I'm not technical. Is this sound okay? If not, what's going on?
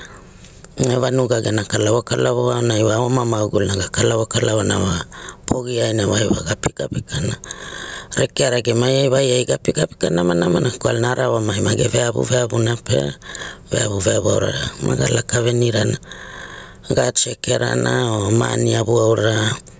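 No, there is gain pumping throughout this speech. Loud and soft parts are squashed closer together in level, a big, breathing swing in level. Unlike a noise gate, it never cuts to silence. Likely cause: microphone gain set far too high, with a fast limiter clamping it down.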